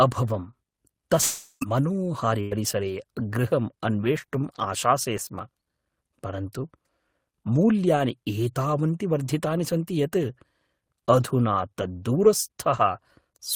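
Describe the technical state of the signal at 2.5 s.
At 2.5 s the signal sits inside a burst of packet loss running from 2.41 to 2.54 s. About 100 ms of speech never arrived, so the receiver stretched the last received sound across roughly 98 ms and turned it down as the gap went on. The result is a held buzz or fading hiss, and then speech resumes further along. On a waveform this looks like a decaying, repetitive stretch. On a spectrogram it appears as smeared, frozen harmonics that fade before normal detail returns.

Overlapping the end of that gap, from 2.51 to 2.53 s, is a lost packet rebuilt from error correction. This 20 ms frame was recovered from a low-bitrate copy carried in the following packet, so it plays without a gap but sounds rougher and noisier than the speech around it. On a spectrogram that short slice shows coarser, grainier texture with less clean harmonic structure. 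On the waveform it shows as a noisier segment with no dropout.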